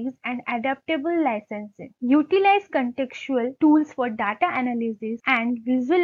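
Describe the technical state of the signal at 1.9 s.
At 1.9 s the signal is intact, with no dropout, distortion, click or other fault audible at that point.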